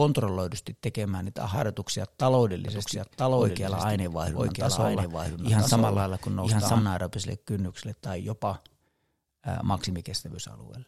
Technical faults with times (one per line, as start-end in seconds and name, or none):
2.68-6.82 doubled audio track